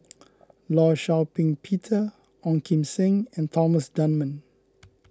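No technical faults can be heard anywhere in the speech recording; the signal stays intact and continuous throughout.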